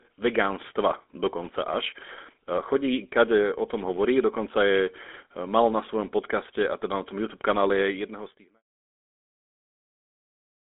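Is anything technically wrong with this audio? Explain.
Yes. The entire speech clip has passed through the GSM full-rate codec, which rebuilds the voice from a vocal-tract model driven by a sparse pulse excitation that keeps only every third sample, consistent with a 13 kbps full-rate stream. The line band runs from about 250 Hz to 3.6 kHz, so the sound is thin and muffled, and the codec damage is plainly audible as a buzzy, gravelly roughness, still present through the gentle fade-out from around 7.5 s to 8.63 s.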